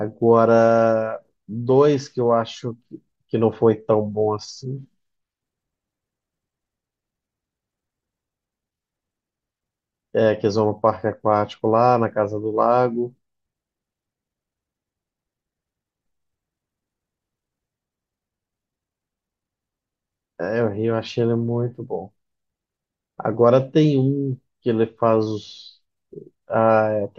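No technical faults are audible.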